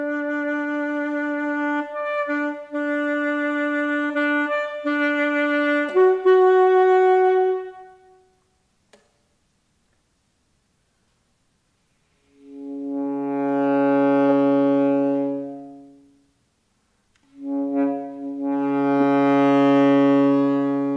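Listening through the recording, nothing stood out as a technical fault at any point.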